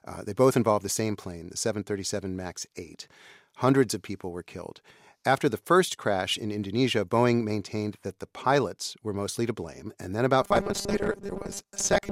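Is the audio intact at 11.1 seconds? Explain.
No. From 10.42 s, right after "then about", to the end of the clip at 12.11 s, the speech turns into a rigid, metallic buzz at 200 Hz that only loosely tracks the words: robotic sound from repeated short buffers. The likely cause is audio arriving too seldom, so the software loops a 5 ms stretch and skips about half the real signal. A spectrogram shows evenly spaced harmonics locked to 200 Hz; the waveform shows identical short cycles repeating.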